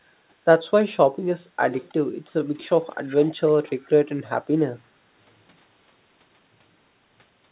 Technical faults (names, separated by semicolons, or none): echo leak